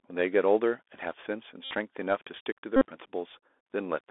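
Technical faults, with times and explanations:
throughout: Bluetooth CVSD headset codec. The sound sits in a narrow band from 300 Hz to 3.6 kHz, with a granular hiss beneath it and scratchy sibilants where the one-bit delta coder's adaptive step can't keep up, which fits 64 kbps CVSD. On a spectrogram, energy stops hard near 3.6 kHz, with grainy noise filling the band.
1.64–1.73 s and 2.76–2.86 s: Bluetooth headset packet repeated. About 68 ms and then about 49 ms of audio were lost, which points to runs of roughly 18 and 13 packets. Each lost stretch was refilled by replaying the previous packet every 3.75 ms, giving a steady buzz near 267 Hz. A spectrogram shows evenly spaced horizontal harmonic lines, and the waveform shows a short pattern recurring every 3.75 ms.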